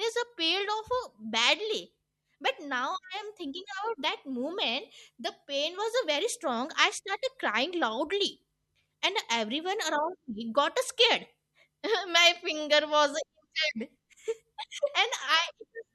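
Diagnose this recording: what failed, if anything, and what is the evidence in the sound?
Nothing in this speech recording points to a failure at any stage of the chain. There is no event in the sound that calls for a diagnosis.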